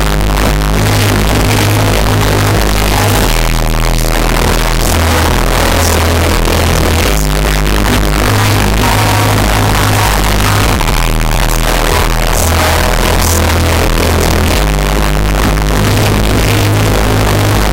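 From the first moment to the end, the audio is buried in very loud, harsh distortion, and quiet passages come through as loud as everything else. The likely cause is signed and unsigned mixed up in 8-bit samples: flipping the top bit turns every zero crossing into a jump across the whole range. Plain 8-bit storage, which this clip also uses, would instead leave only a faint grainy hiss well below the signal, never this roar.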